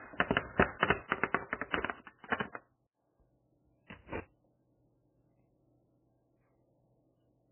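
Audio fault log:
Throughout: MP3 compression, likely. Nothing is heard above 3.1 kHz, and the sound is watery and swirling, with smeared attacks. The heavy damage fits an encoder starved of bits, around 9 kbps, cutting the treble and switching weak frequency lines on and off between frames.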